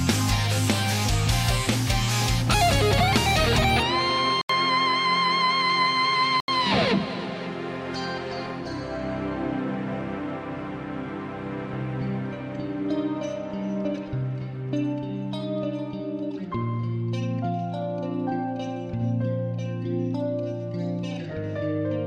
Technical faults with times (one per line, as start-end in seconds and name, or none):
4.41-6.48 input switched to a poorer device